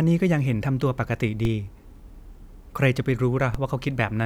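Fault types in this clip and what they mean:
DC step: A low thump at 1.45 s and again at 3.55 s while the speech carries on unchanged, because the waveform's zero line suddenly shifts by about -16 dBFS and then settles back as a 20 Hz high-pass drains the offset away.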